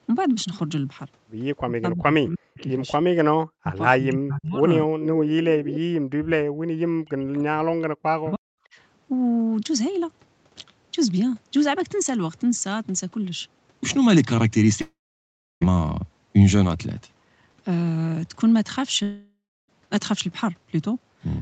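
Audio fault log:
1.65–8.46 s, speech suppressed in double talk: at 1.65–2.6, 3.57–3.79, 3.98–4.63, 4.86–5.84, 6.17–6.37 and 6.76–8.46 s the voice dips by up to about 40 dB, with the waveform pinching and the spectrogram fading in patches. The likely cause is an echo canceller ducking during overlap.
2.6 s, echo leak: a faint delayed copy about 25 dB down arrives 310 ms late, which shows as a weak repeated smear on the spectrogram. This likely comes from residual loudspeaker pickup.
14.81–15.63 s and 19.03–19.7 s, long network dropout: a fading buzz continues the last sound, then a flat gap of roughly 670 ms and 300 ms appears in the waveform. The likely cause is lost packets.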